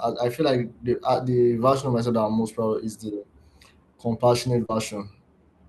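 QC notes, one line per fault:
4.65–4.71 s: short concealed packet loss. About 40 ms of speech arrived too late, and roughly 35 ms was filled by continuing the preceding sound, then blending back, giving a brief smear.
4.69–4.71 s: lost packet rebuilt from error correction. One 20 ms packet was replaced by the low-bitrate copy carried in the following packet, so nothing drops out, but that frame sounds rougher and noisier. On a spectrogram it shows as a grainier, less defined slice, while the waveform stays continuous.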